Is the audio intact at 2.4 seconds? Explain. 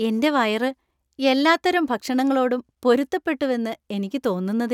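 Yes, at 2.4 s the speech runs through intact, with no dropout, click, distortion or other fault at that moment.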